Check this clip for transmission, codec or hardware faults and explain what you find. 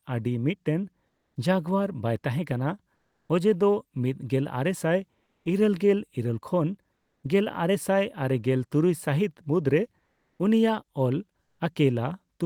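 One fault type appears: comfort noise in place of the background, at 1.07–1.35 s (after "ᱟᱹᱰᱤ ᱢᱤᱫᱴᱮᱱ"), 2.95–3.29 s, 5.23–5.45 s, 6.95–7.23 s and 10.05–10.39 s. Likely Opus discontinuous transmission stops sending audio in pauses, and the receiver fills each gap with steady synthetic noise about 1 to 4 dB quieter than the real background. On a spectrogram these gaps are flat, smooth patches without the background's detail. On the waveform they are an even, featureless low-level fill.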